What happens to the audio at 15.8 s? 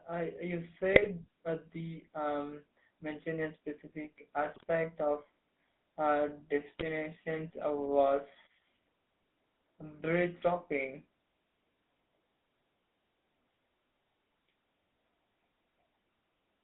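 At 15.8 s the speech carries GSM full-rate codec damage, present throughout: pulse-driven vocal-tract coding leaves a buzzy, gravelly roughness, and the spectrogram shows a hard ceiling near 3.7 kHz.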